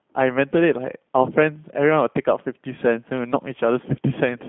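Throughout, the speech has passed through a G.729 codec, consistent with the 8 kbit/s G.729A variant, which rebuilds each 10 ms frame from a vocal tract model and sparse pulses. The sound is confined to about 150 Hz to 3.5 kHz, nothing above 3.6 kHz, and has a plainly audible rough, synthetic texture.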